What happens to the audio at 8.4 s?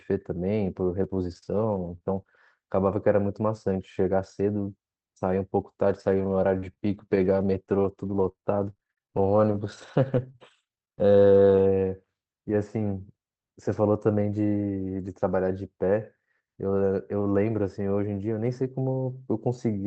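At 8.4 s you're in the middle of repeated packet loss (robotic sound), running 5.9–11.6 s: about 31 short gaps, each patched by stretching the previous sound, so speech turns choppy and robotic.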